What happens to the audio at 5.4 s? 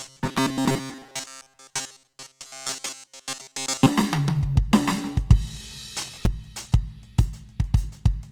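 At 5.4 s the music sounds grainy and rough, with noisy tones, as it does throughout; likely Opus compression at a low bitrate near 24 kbps. A spectrogram shows filled, speckled bands across the full band.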